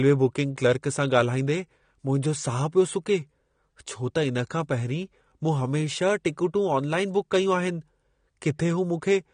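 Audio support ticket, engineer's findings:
Likely low-bitrate AAC compression (AAC-LC), consistent with about 32 kbps: coarse quantisation, band-limited. Speech dull and smeared throughout, nothing above 9.7 kHz, plainly audible warbling artefacts.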